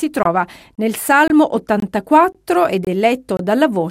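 There's a gap between chunks every half-second chunk, silent holes of about 23 ms at 0.23, 0.75, 1.28, 1.80, 2.32, 2.85 and 3.37 s.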